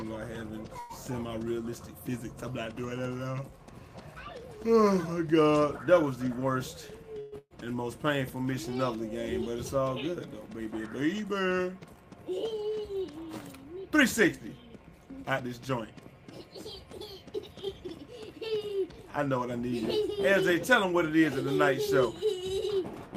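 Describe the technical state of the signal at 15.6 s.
At 15.6 s you're right near the end of a jitter buffer speed-up that runs from about 14.45 to 15.70 s. The receiver had built up more buffered audio than it wanted, so it kept snipping out short pitch-period-sized chunks back to back to catch up, around 150 ms in total. The result plays at roughly 109% speed with the pitch unchanged, so the sound comes across as noticeably hurried through that stretch.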